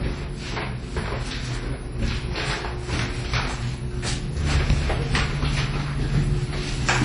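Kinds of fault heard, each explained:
WMA compression: sound rings and smears with a hiss breathing along, nothing above about 10.1 kHz, likely from low-bitrate transform coding around 32 kbps.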